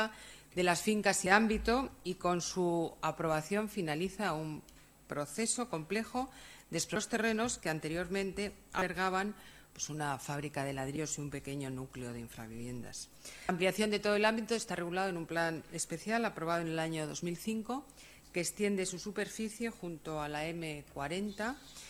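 Damaged data in a compressed stream appears at 1.26 s, 6.96 s, 8.78 to 8.82 s, 10.96 s and 13.49 to 13.52 s: corrupted frames are misread, the decoder loses sync and hunts for the next header, leaving brief chirps or blips.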